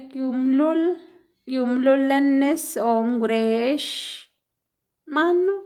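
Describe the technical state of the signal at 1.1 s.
At 1.1 s the audio is intact, with no audible fault in the signal at that point.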